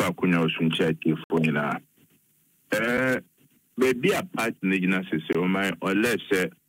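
At 1.24 to 1.30 s and again at 5.33 to 5.35 s, blocks of digital silence drop out 60 ms and 20 ms of sound, cutting out and back with no fade. The waveform shows a near-flat line, and the spectrogram shows blank vertical gaps.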